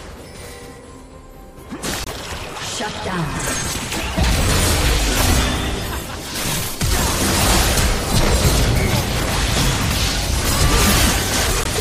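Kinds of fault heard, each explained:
MP3 compression: The whole clip has a watery, swirly quality, with weak parts of the sound flickering in and out from moment to moment. That's the likely mark of an MP3 encoder starved of bits. It drops the quieter frequency lines and trims the top end to save space. The damage is plainly audible throughout and fits a low bitrate of around 64 kbps.
Damaged data in a compressed stream: Twice the playback briefly breaks up, from 2.03 to 2.08 s and again from 11.62 to 11.67 s, the glitches lasting about 52 and 44 ms. This happens when part of the compressed data has gone bad. The decoder can't read the frames there, loses its place and skips ahead to the next frame it can lock onto. The result is a short burst of garbage or a gap.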